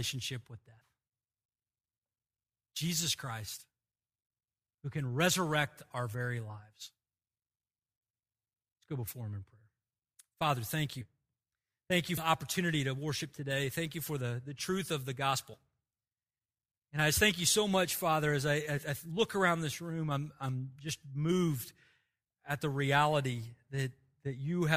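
Whole 20 ms compressed frames are skipped in decoding, so the speech jumps ahead at 11.01 s, at 12.17 s just before "opportunity to worship today", at 15.53 s after "the truth of the", and at 18.77 s between "as I" and "I look around this".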